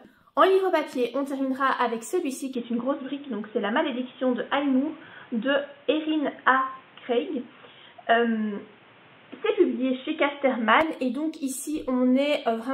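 From 2.55 to 10.81 s the sound dulls abruptly, likely an input switched to a poorer device. The spectrogram goes empty above 3.8 kHz and a faint background noise appears.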